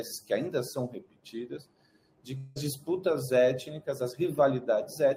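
The audio has a gap from 2.37 to 2.58 s that is most likely a long network dropout: packets stopped arriving for about 0.2 s and the receiver had nothing real to play. It filled roughly 180 ms by stretching the last sound into a fading buzz or hiss rather than falling silent. When the stream resumes at 2.58 s, about 180 ms of the original audio is simply gone, so the sound jumps ahead.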